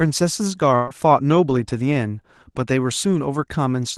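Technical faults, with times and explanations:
0.75–0.89 s, burst of packet loss: several consecutive packets never arrived in time, so roughly 120 ms of the signal is gone. For about 116 ms the receiver's concealment stretches the last decoded sound, decaying it as the gap continues, and there is no silent stretch. A held buzz or fading hiss results before the audio picks up further along, with that section skipped. The surrounding audio is band-limited near 12 kHz, which fits an Opus call codec.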